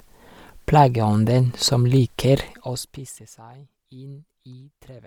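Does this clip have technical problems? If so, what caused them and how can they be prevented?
Yes. Throughout the clip the speech carries a breathy, grainy edge that is plainly audible, most likely from Bluetooth LC3 compression. The transform codec works in 10 ms frames, and at a rate that fits about 48 kbps it zeroes parts of the upper spectrum and fills them with noise. On a spectrogram the high band looks speckled and patchy, with nothing above 20.2 kHz, while the waveform itself shows no obvious damage. To prevent it, record over a wired path or set the Bluetooth link to a higher LC3 bitrate.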